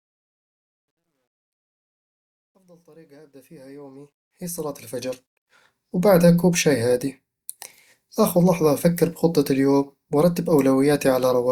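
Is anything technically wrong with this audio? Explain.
Yes. From 0 to 5.64 s the fade-in shows truncation distortion on a fade. The gain stage drops low-order bits without dither, which fits a 12-bit path, so quiet samples collapse into coarse square steps. From 0 to 3.24 s the sound is gritty.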